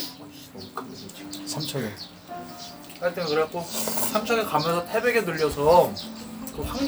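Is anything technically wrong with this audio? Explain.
No, nothing is technically wrong with this audio. The recording of sounds has no fault that a listener would need to point out.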